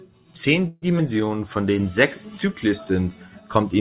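From 0.68 to 0.84 s the speech stalls in a call audio freeze, most likely because packets were held up in transit and the jitter buffer ran dry. For about 140 ms the receiver stretches the last sound into a fading buzz rather than dropping to silence. The audio then resumes exactly where it left off, so nothing is lost but everything after arrives about 140 ms later. On a spectrogram the harmonics flatten into steady horizontal bands that dim over the gap, with no onsets. The waveform shows a repetitive, slowly shrinking pattern, and all of it sits below the 4 kHz ceiling that the G.711 mu-law narrowband path imposes.

At 0.98 to 1.01 s comes short concealed packet loss. About 40 ms of audio never reached the decoder, and roughly 10 ms of synthetic continuation stands in for it before the real signal blends back in. Because the missing stretch is longer than the fill, the playout jumps ahead and recovers roughly 30 ms of the earlier delay. 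It is heard as a brief smear or wobble. The spectrogram shows a narrow blurred slice where fine detail breaks, and the waveform shows a small discontinuity at the splice.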